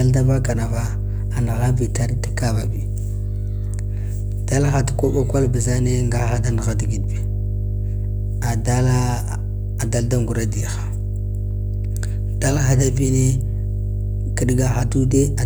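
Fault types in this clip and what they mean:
Mains hum: a steady low tone at 50 Hz runs under the speech for the whole clip, the signature of power-line current leaking into the signal path through a ground loop or from a nearby transformer's magnetic field. Here it is strong, sitting at roughly the same level as the speech itself, so the low drone is continuous and prominent rather than a faint background buzz, and it fills the gaps between phrases as well.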